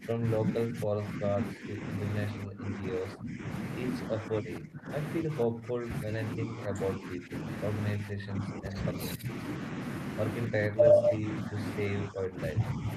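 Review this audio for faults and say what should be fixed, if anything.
The speech keeps ducking by roughly 15 to 20 dB at 0.0–1.87, 2.31–3.48, 4.1–4.9, 5.23–7.47, 7.95–9.28 and 10.48–12.89 s. That's likely speech suppressed in double talk, with the echo canceller turning the near talker down along with the echo. Tuning its double-talk detection to keep the near end open would fix this.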